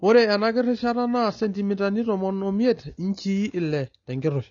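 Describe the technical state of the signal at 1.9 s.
At 1.9 s the speech is still under the same damage that runs through the whole clip, most likely AAC compression at a low bitrate, something around 24 kbps. Short of bits, the encoder quantises its frequency lines coarsely and drops the top band, so nothing reaches above 7 kHz. The sound at that moment is dull and smeared, with sibilants turned fizzy and a warbling texture on sustained sounds.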